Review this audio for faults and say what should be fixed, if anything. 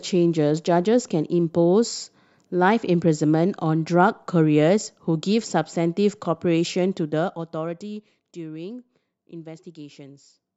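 Nothing needs fixing; no faults can be heard here.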